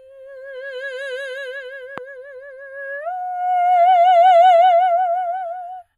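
One channel of the music runs late by a tenth of a millisecond or so, a few samples, and summing the two to mono produces channel delay (comb filtering) throughout. Cancellation carves fixed notches starting near 5 kHz, leaving the top end hollow and dulled.

At 1.98 to 2.00 s, a sudden voltage step, likely from a plug, switch or static discharge, adds a single loud pop peaking around 10 dB above the music. It is a sharp transient sitting on top of the sound, which continues underneath.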